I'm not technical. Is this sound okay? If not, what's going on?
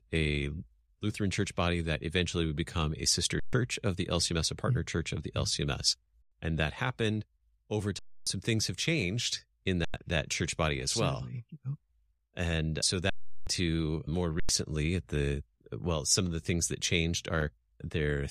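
No. The speech briefly freezes six times, at 3.39, 6.22, 7.99, 9.85, 13.10 and 14.40 seconds. This is an underrun with held sample. Playback ran out of data, so the sound flattened for 0.09 to 0.37 seconds. A little speech was lost each time.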